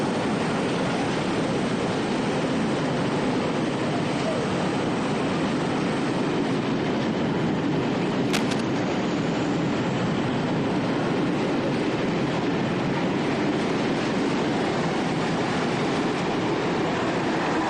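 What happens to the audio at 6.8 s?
Nothing goes wrong at 6.8 s: the audio plays through that moment intact, with no dropout, click or other fault.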